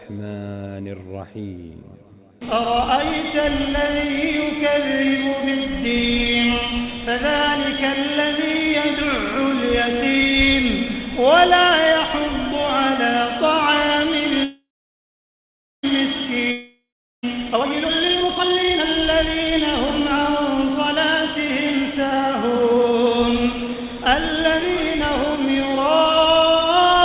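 From 14.44 to 15.85 s there is a call audio freeze, likely from packets held up in transit draining the jitter buffer. The last sound stretches into a fading buzz, then about 1.2 s of silence, and the audio resumes intact after a 1.4 s gap.

At 16.51 to 17.39 s a long network dropout follows, probably from packets never arriving. The sound fades to about 0.4 s of silence, and roughly 0.7 s of audio is simply lost when it returns.

From 17.37 to 19.56 s a jitter buffer speed-up trims the excess delay by cutting short pitch-period pieces. Playback runs at 151% with unchanged pitch, sounding plainly hurried as around a second is removed. A milder speed-up, at 105%, runs from 21.77 to 24.91 s and drops about 0.15 s.

Throughout, nothing above 4 kHz is heard, which fits a 64 kbps G.711 mu-law call codec.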